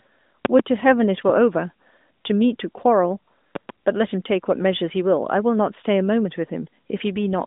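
At 0.45 s, a loud pop lands on the speech as a double pop, two sharp clicks within about 0.17 s, peaking roughly 20 dB above the speech. A second double pop follows at 3.55 s, lasting about 0.17 s and peaking roughly 15 dB above the speech. The speech continues underneath both. The likely cause is a sudden voltage step, such as a connector or switch transient, passing through the chain. The narrowband mobile band-limiting, with nothing above about 3.8 kHz, sits under both events.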